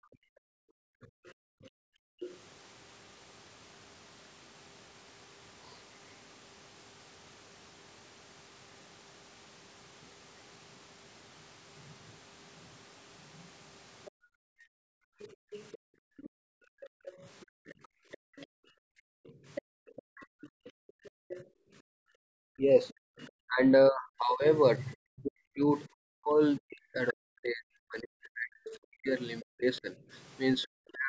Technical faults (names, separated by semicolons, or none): speech suppressed in double talk; other side's voice leaking through; background gated by the echo canceller